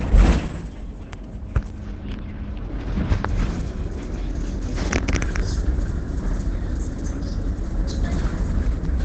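Throughout, nothing sounds above 8.8 kHz, and the audio is muffled and hoarse. This is likely heavy Opus compression, its speech mode, around 12 kbps.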